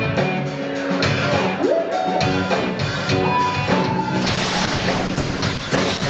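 Call bitrate drop from 4.23 s to the end: the encoder falls from 96 to 9 kbps and bandwidth narrows to 8 kHz, leaving the audio coarse and muffled.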